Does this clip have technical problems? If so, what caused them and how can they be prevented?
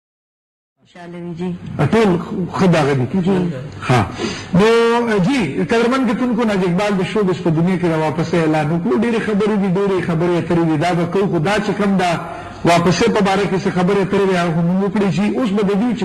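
No, there's nothing wrong here: the level just eases up in a smooth fade-in from around half a second to 2.01 s, the way an editor would shape an opening, with no click or hard edge.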